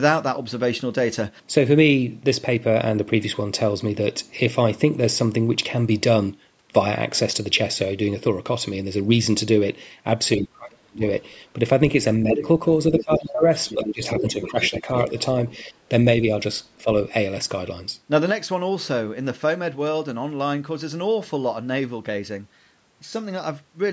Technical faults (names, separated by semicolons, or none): speech suppressed in double talk; other side's voice leaking through; sudden gain jump